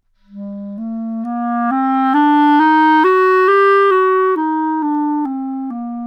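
A recording of sounds with two sharp clicks, at 1.95 s and 4.95 s, likely from dropped samples: roughly a single sample missing each time, making the waveform jump abruptly.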